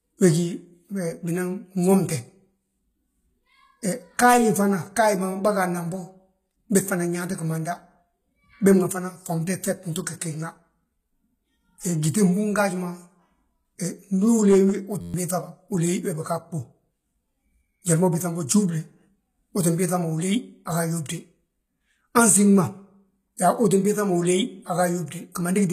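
Speech clip, and the whole thing carries a band-replicated treble with nothing above 14.9 kHz. The codec damage is plainly audible, so the high end sounds synthesised rather than real, most likely HE-AAC compression (v2) at a low bitrate somewhere around 20 kbps, where the upper bands are copied up from below and don't line up harmonically with the lower ones. From about 0.11 s right to the end there's a regular tick roughly every 70 ms, some four hundred of them. That pattern points to clock slip clicks from two unsynced clocks drifting apart by around 300 ppm, with single-sample slips each time the error adds up. At 15.01 to 15.14 s there's a system hang loop: an 11.61 ms scrap of audio repeats 11 times, giving an 86.1 Hz buzz, which fits a 512-sample ring buffer cycling while the system froze, and about 150 ms of real audio goes missing. Finally, at 25.32 to 25.34 s there's pre-echo, a hiss smeared about 25 ms ahead of an attack because the codec spread that block's quantisation noise into the quiet lead-in.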